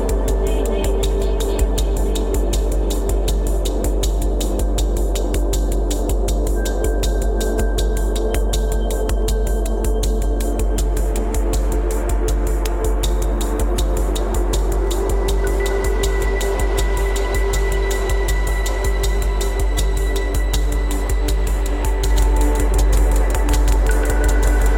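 At 22.1 s the audio abruptly gains a flat, dry echo of itself, a full-band copy trailing roughly 150 ms behind and only about 5 dB quieter, running to the end. This doubled audio track likely comes from a second, slower capture path mixing in.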